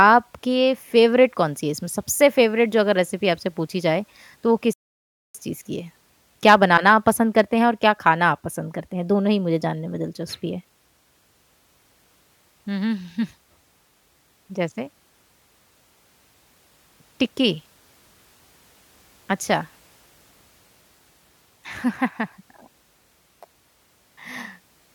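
At 4.73 s the speech just drops out and stays silent until 5.35 s, a gap of about 0.61 s, before carrying on. That's a playback stall. The player most likely ran dry of data, or its thread got held up, so it had nothing to send to the output for that stretch. It sounds like the audio freezes mid-flow rather than fading. There's a clean hole in the middle of a phrase, then it picks back up.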